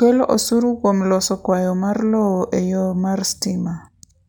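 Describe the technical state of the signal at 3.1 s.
At 3.1 s the speech carries imaging from linear upsampling, present across the whole clip. The band stops near 12 kHz, which fits a 24 kHz source raised to 44.1 kHz by straight-line interpolation between samples. That interpolation filters poorly, so the top octave sounds dulled while a mirrored copy of the spectrum sits between 12 kHz and 24 kHz, roughly 30 dB down, adding a faint metallic shimmer to sibilants.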